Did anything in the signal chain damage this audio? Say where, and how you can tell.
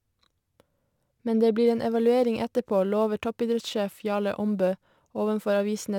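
Yes: sample clock jitter at the converter, from 1.66 s to the end at 5.98 s. A hiss-like roughness rides on the speech, loudest on bright, fast-changing sounds and absent in pauses. The clock wobbles by a few microseconds, leaving error around 35 dB below the signal.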